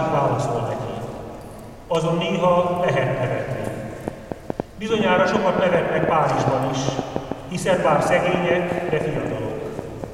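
From 3.67 s to 10.05 s a train of clicks runs over the sound, about 5.2 per second at irregular spacing, some thirty similar pulses peaking well above the signal level. They are heard as uneven ticking, likely from electrical interference or a faulty connection or power supply.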